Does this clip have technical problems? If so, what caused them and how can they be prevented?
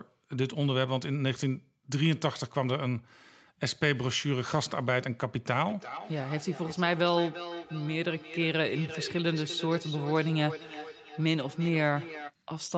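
Yes. Feedback echo between two devices runs from 5.61 to 12.35 s: the speech returns roughly every third of a second, peaking about 12 dB below the direct sound, because a second nearby device plays this microphone's audio and it is re-captured. To prevent it, keep only one device joined to the call in the room, or mute the other's speaker and microphone.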